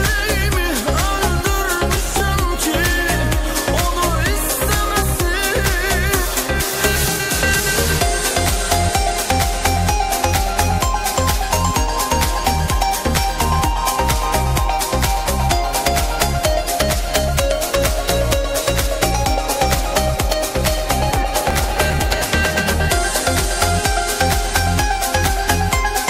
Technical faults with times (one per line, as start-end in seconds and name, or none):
1.96-2.20 processor overload crackle
21.11-22.29 processor overload crackle